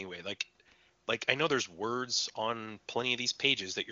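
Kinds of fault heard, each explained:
No faults heard; the speech sits in a wideband voice channel whose content stops near 7.3 kHz, consistent with a high-rate HD Voice link.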